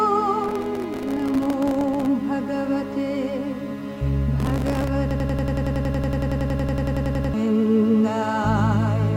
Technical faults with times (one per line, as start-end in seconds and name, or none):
0.44-2.06 processor overload crackle
4.40-4.88 processor overload crackle
5.11-7.34 system hang loop